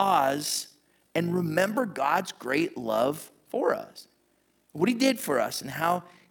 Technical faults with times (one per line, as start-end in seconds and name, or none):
0.00-6.31 overlap-add ripple